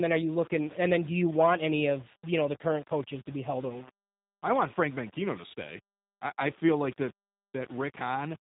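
From start to finish the speech carries the G.729 codec's signature, and it's plainly audible. Everything is rebuilt from a vocal tract filter, a pitch guess and a handful of pulses per frame, so voices come out slightly rough and synthetic. Nothing gets through above 3.8 kHz, which leaves consonants dull and boxy. The overall character fits an 8 kbit/s G.729A stream.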